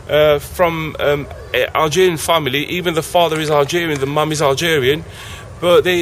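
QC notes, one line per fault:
Throughout: crude rate conversion. The sound carries a gritty, inharmonic fizz that tracks loud and bright passages, which fits an upsampling from 32 kHz to 48 kHz by repeating the nearest sample, with no interpolation filter. The uneven repeat pattern creates false tones about 25 dB below the signal. On a spectrogram, mirrored partials appear above 16 kHz, moving opposite to the real ones, and the zoomed waveform shows small irregular stair-steps.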